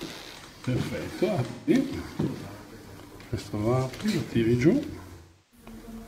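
Around 1.50 s there's a dropout of AAC frames with concealment running until about 1.74 s. Roughly 0.17 s of data went missing, which fits about four frames, and the decoder papered over it by reusing the last good spectrum, so the sound there goes smeared and a bit noisy. The same thing hits harder from 5.17 to 5.66 s, where about 0.34 s of data is gone, consistent with around eight frames, giving a longer patched-over stretch.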